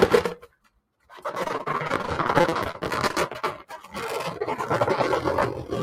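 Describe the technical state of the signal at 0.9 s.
Sound cut by the noise suppressor, 0.41 to 1.13 s: the speech-tuned suppressor treated this sound as noise and pulled it down by up to about 20 dB, so it sinks in level. This sits within a noise suppressor applied to the sounds throughout, whose gain swings by around 10 dB, making held material pump and thin out while sudden onsets pass.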